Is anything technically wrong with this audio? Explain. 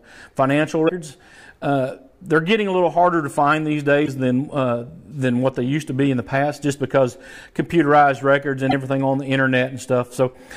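Yes. Damaged data in a compressed stream appears three times: 0.85 to 0.90 s, 4.04 to 4.08 s, and 8.69 to 8.73 s, each lasting about 45 ms. In each spot, part of the encoded data was corrupted, so the decoder misread or rejected those frames, lost sync and searched for the next valid frame header before resuming. The result is a brief disruption in the audio, heard as a chirp, squawk, click or short hole.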